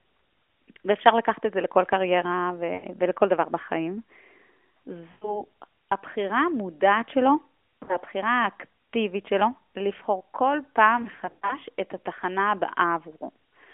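Lost AMR speech frames occur at 2.74–2.87 s, 5.12–5.43 s, 7.84–7.97 s and 11.02–11.57 s. Radio errors corrupted frames, so the decoder repeated the last good pitch and vocal tract settings with falling gain. The first two gaps, about 100 ms each, draw the speech out and fade it. At 7.84 s a 40 ms loss gives a brief dip. Near 11 s, dropouts of up to 40 ms scatter across half a second, giving a choppy warble over light narrowband buzz.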